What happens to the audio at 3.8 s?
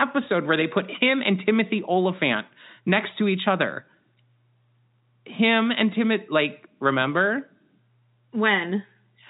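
Nothing goes wrong at 3.8 s: the speech carries on intact through that moment, heard through the ordinary narrow band of G.711 telephone coding.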